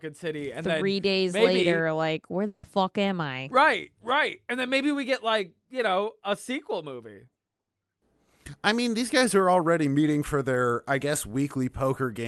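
The clip is speech carried over a call path, with its top end cut off near 12 kHz. From 2.47 to 2.65 s there is a long network dropout, likely. About 0.16 s of lost audio is replaced by a fading synthetic continuation. Speech then resumes, with that stretch gone.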